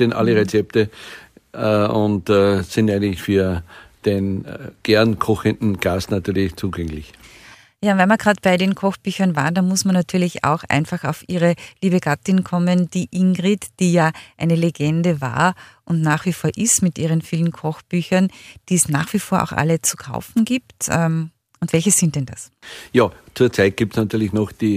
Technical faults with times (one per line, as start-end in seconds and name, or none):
none